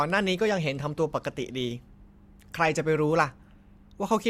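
At 3.39 s there is an overlap between stream segments. Two adjacent pieces of the stream claimed the same stretch of time. The player treated that stretch as doubled and discarded it. But the sound was not really repeated. About 9 ms of speech is simply missing. The waveform jumps across the gap without a smooth join. It is heard as a tiny skip in the speech. The timing fits a stream built from 4-second segments.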